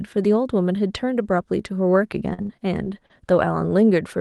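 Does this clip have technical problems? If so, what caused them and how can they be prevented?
Yes. Repeated packet loss (robotic sound) runs from 2.33 to 3.11 s. Five dropouts, the longest 70 ms, are each patched by extending the preceding sound, so about 23% of that stretch is synthetic, giving a choppy texture. A more stable network path, forward error correction and a deeper jitter buffer would prevent it.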